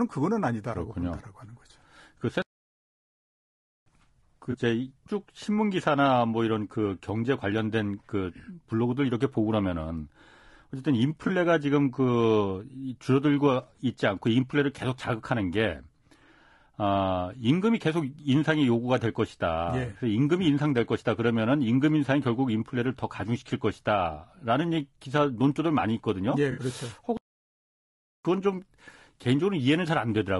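Throughout, the speech sounds rough and grainy, with a noisy haze between the harmonics and a thin, somewhat synthetic top end. That points to low-delay AAC compression, likely AAC-ELD at a bitrate that fits about 32 kbps. Its short analysis frames cannot separate closely spaced pitch harmonics well, and at this rate there are too few bits to code them cleanly, so the damage is plainly audible.

From 2.42 to 3.86 s the sound stops dead mid-flow for about 1.4 s and then resumes. This is a playback stall, most likely the player running short of data or having its output thread blocked, leaving silence until it recovered.

At 4.51 to 4.55 s and again at 11.27 to 11.30 s there is a brief smeared, noisy blip. This is AAC frame loss with concealment. Each gap fits a single missing frame of about 20 ms that the decoder patched from the previous good spectrum. A longer patch at 26.51 to 26.61 s, which fits three frames or about 60 ms, sounds washed and phasey because the concealment had to stretch the old spectrum further.

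A second playback stall follows from 27.17 to 28.25 s, cutting the sound to silence for about 1.1 s before it picks up again, again likely from the player being starved or blocked.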